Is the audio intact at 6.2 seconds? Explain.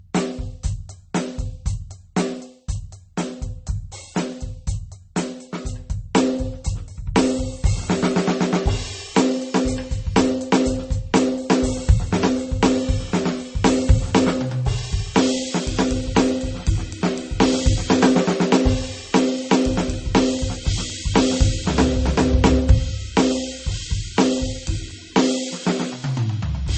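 No. At 6.2 seconds, as across the whole music clip, there is transcoding between lossy codecs. Nothing survives above about 8.4 kHz, and smeared, watery artefacts sit under a second layer of coarse texture. That layering sets it apart from a single low-bitrate encode. The likely cause is a low-rate MP3 re-encoded as HE-AAC at a modest bitrate.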